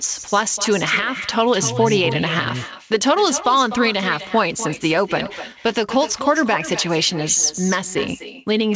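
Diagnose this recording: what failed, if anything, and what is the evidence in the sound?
Echo with no canceller, a call-processing failure: the far end's loudspeaker leaks into its microphone uncancelled, so every phrase returns about 13 dB quieter roughly 300 ms later, showing as faint delayed copies on the spectrogram.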